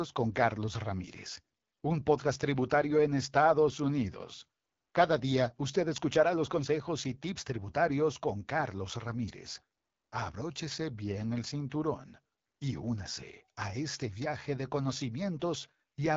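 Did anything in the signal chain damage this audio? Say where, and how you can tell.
Yes. The damage comes from the codec stage: the whole speech clip has passed through the AMR wideband (HD Voice) codec. The raspy, rough texture throughout points to one of its lowest modes, which fits about 8.85 kbit/s. On a spectrogram, energy stops dead at 7.5 kHz. Above about 6.4 kHz the band shows smeared, noise-like fill without harmonic striations, because that range is synthesized shaped noise rather than coded detail.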